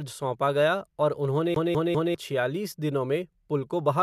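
From 1.54 to 2.15 s the read position keeps jumping back to one spot, a CD stuck on one turn. After "सौंपा गया और उन्होंने", a 0.2 s slice of speech repeats three times, each jump marked by a brief mute, before "छियालीस दिनों" resumes.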